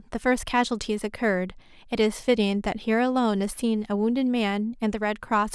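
Nothing goes wrong anywhere in this bit of speech, so there's no fault to point to at any moment.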